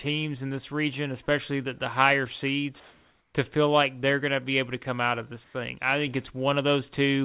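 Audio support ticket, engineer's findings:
Background turns flat and featureless at 2.80–3.34 s, after "especially the the higher", and 5.44–5.54 s, before "I think". This is comfort noise in place of the background, likely from DTX filling the silence.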